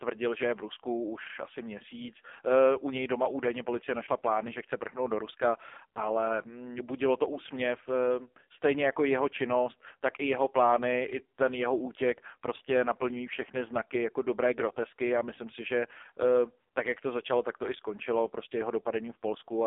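Throughout, the speech has passed through an AMR narrowband mobile codec at a low rate, consistent with about 5.15 kbps. It is confined to 300 Hz to 3.5 kHz, nothing above 3.6 kHz, and sounds heavily buzzy and synthetic.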